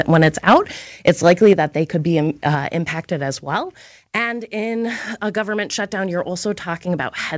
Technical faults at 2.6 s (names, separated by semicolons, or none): microphone volume stepped down